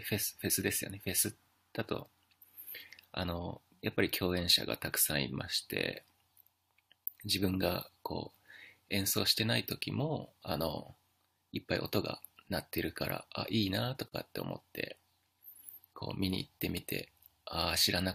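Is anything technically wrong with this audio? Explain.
Yes. This speech clip has a gap at a join of encoded pieces, from 14.08 to 14.12 s. The sound drops out for about 39 ms and then resumes exactly where it stopped. It was encoded as separate pieces and joined without trimming. The padding from the end of one piece and the start-up silence from the next both stayed in. The codec smears the edges of the dropout.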